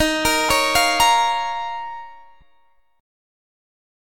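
At 0.49 s and again at 2.41 s there are lost LE Audio frames, each a roughly 10 ms single-frame gap the decoder patched with reused, sign-scrambled spectrum, heard as a brief noisy smear.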